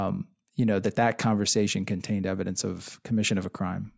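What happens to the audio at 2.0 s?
Nothing goes wrong at 2.0 s; the audio plays through that moment intact, with no dropout, click or other fault.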